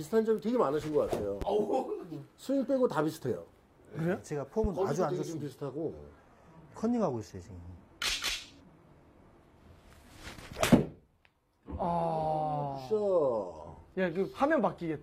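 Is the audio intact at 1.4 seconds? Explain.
No. A loud pop lands between 1.42 and 1.45 s, one sharp thump peaking about 10 dB above the surrounding sound, which carries on beneath it. The likely cause is a sudden voltage step from a plug, switch or static discharge, shaped by downstream circuitry.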